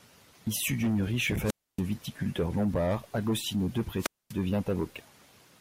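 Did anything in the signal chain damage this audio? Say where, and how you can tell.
Yes. Wireless microphone squelch dropout in the radio link. At 1.44–1.82 s and 3.98–4.34 s, hiss swells, then silence. A fading signal trips the receiver's squelch.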